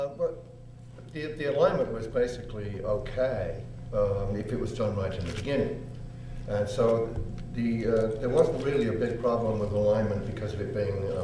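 Nothing is technically wrong with this audio.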